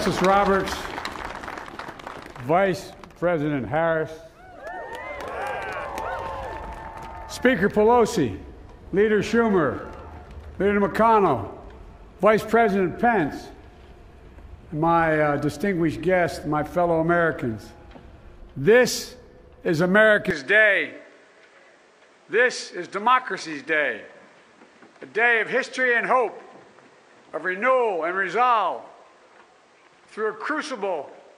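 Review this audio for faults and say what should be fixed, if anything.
Input switched to a poorer device, from 20.31 s to the end at 31.38 s. At that point the sound abruptly loses everything above 9.9 kHz and turns duller and narrower. A new noise floor appears, roughly 35 dB under the signal. The overall level barely moves, and there is no gap at the change. This most likely reflects the recording input jumping mid-take to a more limited microphone or a headset's call profile. Locking the input device for the session and disabling automatic device switching would prevent it.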